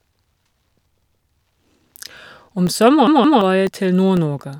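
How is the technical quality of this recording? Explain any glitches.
The recording has two kinds of glitch: a steady series of tiny ticks throughout, and two clear stutters where a chunk of sound repeats.

Periodic USB or driver dropouts: From 0.17 s to 4.17 s, about ten brief gaps of around a millisecond each arrive every 0.5 s. A blocked driver fills them with silence, so they are heard as evenly spaced ticks. Nothing is repeated.

Repeated buffer: At 1.02 s, a 171 ms slice plays once more. At 3.07 s, one plays twice more. The lengths fit an 8192-sample buffer. These are audible stutters with hard joins, losing roughly 150 ms and 300 ms, unlike the short ticks.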